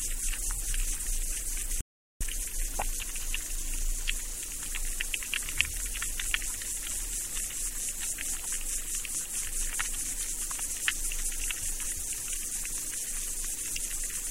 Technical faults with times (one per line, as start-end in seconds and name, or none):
1.81-2.21 audio dropout to silence